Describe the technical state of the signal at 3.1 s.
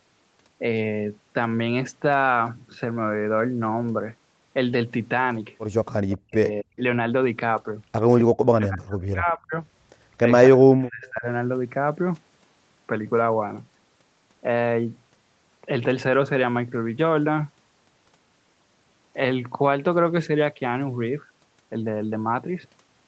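At 3.1 s the speech signal is intact, with only the expected band limit of the call microphone processing, which leaves nothing above 8 kHz.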